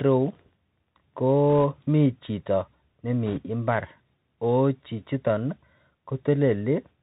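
A speech recording that sounds narrow and muffled throughout, with scratchy s sounds and a granular hiss, the plainly audible damage of the Bluetooth CVSD headset codec, which fits a 64 kbit/s link passing nothing above 4 kHz. Bursts of rushing crackle appear from 1.53 to 1.64 s, just before "mii chito", and more strongly from 3.26 to 3.38 s. These are bit errors on a Bluetooth voice link, at about 0.7 percent and then about two percent.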